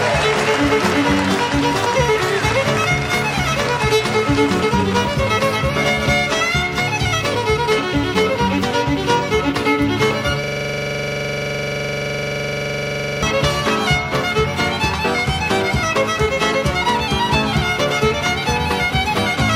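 From 10.44 s to 13.23 s, a system hang loop occurs: the host stalled while the audio hardware kept replaying its ring buffer, so one 42.67 ms fragment, which fits a 2048-sample buffer, repeats 65 times, producing a rapid stutter at 23.4 Hz.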